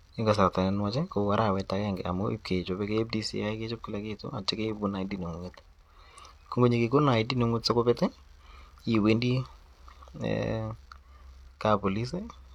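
A recording of speech, with no technical fault audible anywhere in it. Nothing in the signal calls for a time, a value or a cause.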